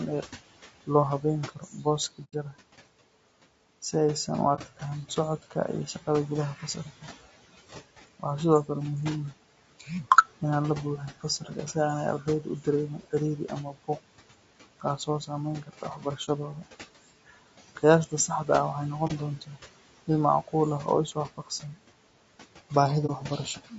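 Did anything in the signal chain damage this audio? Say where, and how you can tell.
Yes. In call processing, noise suppressor artifacts run throughout: the background is pulled down by about 17 dB between phrases and swells under speech.

At the codec stage, the speech is rough and grainy with a lowered top band throughout. This is likely low-delay AAC compression, and the sound fits AAC-ELD at around 32 kbps.

Speech cut by the noise suppressor makes consonants and word endings fade by about 11 to 18 dB within 0.22–2.54, 3.82–5.56, 6.59–8.69, 9.79–18.49, 19.41–21.76 and 22.7–23.72 s. The suppressor mistakes quiet speech for noise.

AAC frame loss with muting leaves a soft-edged hole at 2.24–2.34 s (90 ms) and brief dips at 4.55–4.60, 16.25–16.29, 19.07–19.12 and 23.06–23.11 s. The decoder zeroes lost frames, and overlapping windows fade across each one.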